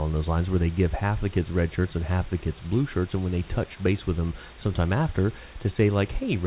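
No faults are audible; the speech arrives over a narrowband G.711 mu-law call path with nothing above 4 kHz, and the room noise sits about 25 dB below it.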